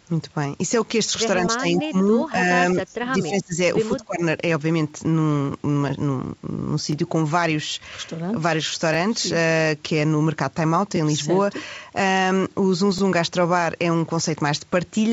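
At 0.86 s the first overlapping chunks fault appears: the chunks are 2 seconds long, but each begins before the previous one ends, so 20 ms of speech plays twice at the join. It sounds like a click or stutter. It repeats at 2.88, 4.90, 6.92, 8.94, 10.96 and 12.98 s. On a waveform each join shows a brief discontinuity. On a spectrogram a thin vertical stripe runs across the band, which stops at 8 kHz.

Between 1.46 and 2.37 s the speech dips by about 10 dB, most likely speech suppressed in double talk: the echo canceller could not separate the talker from loudspeaker echo and turned both down. Deeper dips follow, about 25 dB from 2.74 to 3.57 s and about 20 dB from 3.88 to 4.22 s. These show as sunken stretches in the waveform envelope and faded, patchy energy on the spectrogram.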